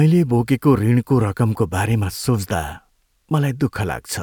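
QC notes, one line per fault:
No faults heard; nothing to log.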